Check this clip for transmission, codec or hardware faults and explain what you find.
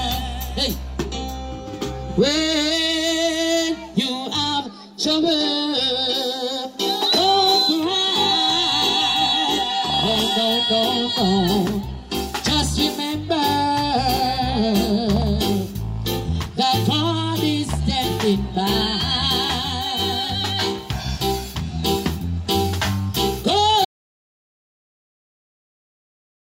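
One fault is present. Audio dropout to silence from 23.85 s to the end: the input was likely lost while recording continued, so the sound cuts to silence without room tone.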